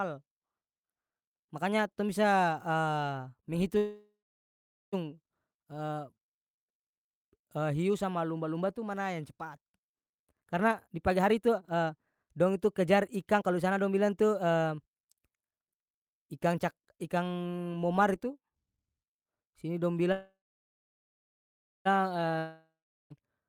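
At 3.77 s the speech stalls for about 1.15 s: the last sound hangs on as a fading buzz, then about 0.77 s of silence, and the speech resumes exactly where it stopped, with nothing skipped. This is a call audio freeze, likely caused by packets held up in transit so the jitter buffer ran dry and the receiver stretched the final sound until delivery restarted. The pause adds about 1.15 s of delay.

From 10.10 s to 14.93 s, right after "yang cepat", the speech sounds hurried, running at about 124% of normal speed while the pitch stays put. This is a jitter buffer speed-up. The buffer held more audio than its target, so the receiver repeatedly cut tiny pitch-period-sized slices, trimming roughly a second of backlog.

After "sini dong", a second call audio freeze runs from 20.12 s to 21.87 s. A brief fading buzz gives way to about 1.5 s of silence before the speech carries on intact, again likely from delayed packets, now adding about 1.73 s of lag.

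At 22.38 s, a long network dropout: about 0.72 s of fill, a fading buzz that ends in 0.38 s of silence, and the speech returns further along with about 1.22 s never heard. No audio arrived for that stretch, likely a lost burst of packets, and skipping the missing part cut the delay by around half a second.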